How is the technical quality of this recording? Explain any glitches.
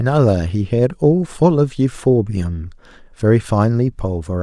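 Listening closely to the speech, nothing stood out as a technical glitch.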